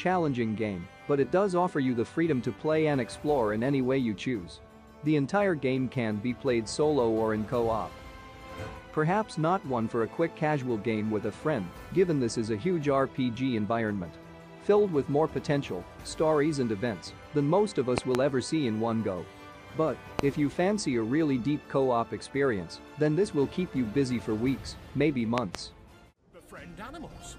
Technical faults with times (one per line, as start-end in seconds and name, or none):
17.98-18.17 loud pop
20.19-20.21 loud pop
25.38-25.57 loud pop